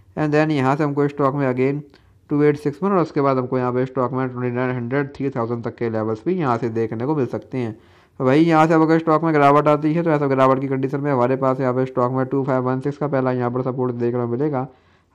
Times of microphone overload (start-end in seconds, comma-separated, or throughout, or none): none